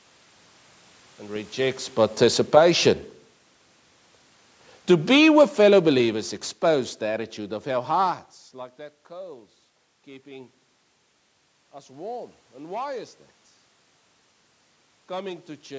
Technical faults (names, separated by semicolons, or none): automatic gain falling